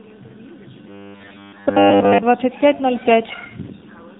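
From the first moment the speech sounds boxed-in and buzzy, with nothing above 3.8 kHz and a synthetic, reedy edge on every syllable. This is the AMR narrowband mobile codec at work. The voice is rebuilt from a vocal-tract model excited by only a few pulses per short subframe. The plainly audible damage points to one of the leaner modes, around 7.4 kbps, where that pulse budget runs thin.

From 0.86 s to 2.23 s the speech turns into a rigid, metallic drone locked at 100 Hz, still loosely tracing the syllables. For most of that stretch the sound seems to loop rather than move forward. The likely cause is robotic sound from repeated short buffers. Audio arrived too seldom, so a 10 ms slice was replayed over and over while the real signal was skipped, stamping its own fixed pitch onto the speech.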